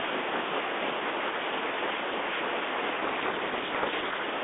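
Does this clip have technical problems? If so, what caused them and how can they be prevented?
Yes. From 3.02 to 4.24 s there's a codec payload misread: the two ends disagree on the bit order of the G.726 code words, so the decoder unpacks garbage and the speech drowns in harsh distortion, whereas the 32 kbit/s G.726 before it sounds only lightly coded. Making sure both sides are configured for the same G.726 packing order would prevent it.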